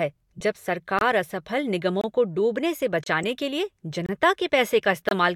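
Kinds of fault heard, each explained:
Corrupt frame decoded: Two brief bursts of misplaced noise cut across the speech, one from 0.37 to 0.41 s and a sharper one at 3.23 s that peaks near -20 dBFS, the first reaching about -25 dBFS. Each lasts roughly two codec frames. The decoder received frames whose bits had been flipped and played them anyway, so misread gains and codes scattered energy into frequencies where the speech had none.
Gap between chunks: Short, hard-edged dropouts of 25 ms break the speech at 0.99, 2.01, 3.04, 4.06 and 5.09 s, a steady beat roughly once per second. The audio was delivered in 1-second chunks, and silence was inserted at each join, likely from padding or from playback starting each chunk slightly late. Nothing is missing from the speech itself, but each seam leaves an abrupt hole that shifts everything after it a little later.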